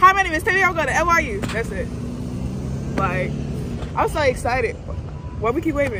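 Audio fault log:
No faults heard anywhere in this recording.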